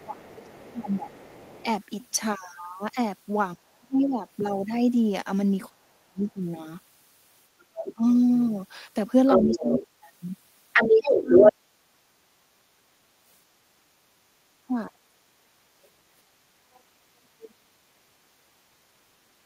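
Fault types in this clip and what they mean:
Speech suppressed in double talk: The talker keeps getting ducked whenever the far end is also talking, most likely because the echo canceller can't tell the two apart and pulls everything down. It happens five times: at the very start, across 3.54 to 6.28 s, in patches within 7.94 to 11.64 s, and in short dips at 14.61 and 17.21 s. The worst dips go down something like 20 to 35 dB, so parts nearly drop out.
Other side's voice leaking through: A second voice sits under the talker, most likely the far end's loudspeaker playback that the echo canceller didn't fully strip from the mic. It's faint in the first 1.65 s and again around 15.83 to 16.8 s, roughly 25 to 35 dB down. Between 7.6 and 11.53 s it's much worse, about as loud as the talker or a bit louder.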